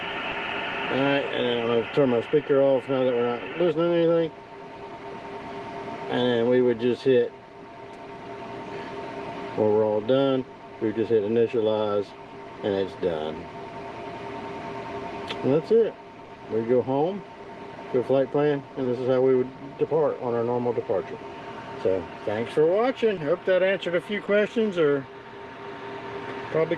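Short concealed packet loss occurs at 0.31, 16.25, 17.43, 18.83, 23.15 and 24.25 s, each a 20 ms gap (40 ms at 16.25 s) that the receiver filled by extending the preceding sound. It is heard as a brief smear or wobble. A spectrogram shows smoothed, repeated harmonics or blurred noise there.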